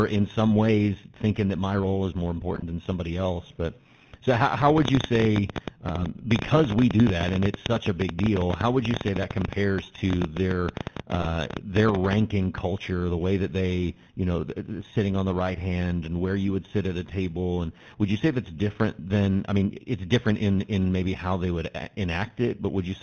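The whole clip is speech run through the GSM full-rate codec at 13 kbps, and the damage is plain. Nothing survives above 4 kHz, and the pulse-driven vocal-tract model leaves the voice buzzy and gravelly, the kind of roughness that is worst on high voices.

On top of that there's periodic clock jitter throughout, with the converter clock wobbling at roughly 3 kHz. Every component picks up sidebands about 3 kHz above and below it, which gives a rough, metallic edge that drops out in the pauses.

First time-based problem: GSM bit errors from 2.54 to 2.63 s, right after "my role is more" and before "than somebody else". Corrupted filter, pitch or gain values wreck a handful of frames, roughly four, so you get a short squawky, gargled burst.

From 4.70 to 12.14 s, starting after "so how how" and running until "culture the way that", there's a train of clicks, about 13 per second, irregularly spaced, around a hundred in all. 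Similar-shaped pops, roughly 15 dB above the speech, tick through pauses too. It's likely interference or a faulty connection.

Inside that stretch, GSM bit errors hit again from 5.98 to 6.11 s, about six frames garbled into pops and gargle. There's one more short one at 11.20 to 11.27 s, a couple of frames, heard as a brief squawk over the clicks.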